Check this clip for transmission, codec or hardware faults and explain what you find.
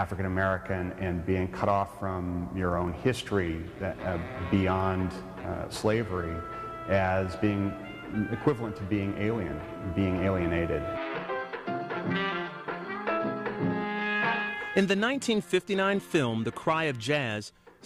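Nothing here points to a problem with how the audio was sent, encoded or captured, so there's nothing to flag.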